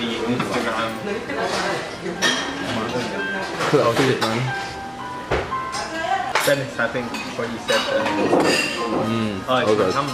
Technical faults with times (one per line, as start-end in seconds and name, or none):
none